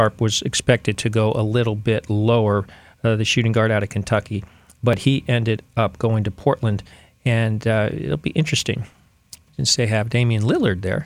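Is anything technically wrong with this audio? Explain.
Yes. Tiny skips break the speech at 0.95 s (before "to go a little"), 4.93 s, 6.93 s (before "and uh it'll be") and 8.92 s (after "uh it'll be interesting"). This is audio missing between chunks, likely a few milliseconds dropped at each 2-second chunk boundary and butted together without silence.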